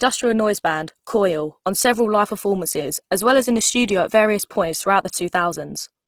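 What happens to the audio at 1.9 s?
At 1.9 s, as across the whole clip, the speech is likely going through Opus compression in its CELT music mode, at a rate that sounds like about 16 kbps. Starved bands are filled with folded or noise-like energy, so the speech sounds plainly rough, grainy and noisy.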